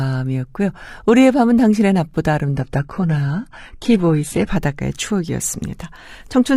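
At 2.56 s the speech abruptly loses quality, and it stays degraded until 4.56 s, when full quality returns just as abruptly, with no gap at either change. This is an adaptive stream at a lower bitrate: the player dropped to a cheaper encoding while the connection was slow. During that stretch nothing is heard above 11.8 kHz, the treble takes on a synthetic, reconstructed character and codec artefacts grow, which points to a switch from roughly 96 kbit/s AAC down to 16 kbit/s HE-AAC.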